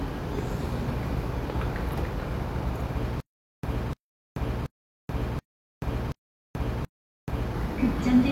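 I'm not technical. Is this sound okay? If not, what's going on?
No. From 3.20 s to 7.52 s there is a stutter with silent gaps: the same 0.3-second burst of sound repeats six times, each followed by 0.43 s of silence. This is likely a stalled player or stream replaying its last fragment, and the sound meant for those seconds is lost.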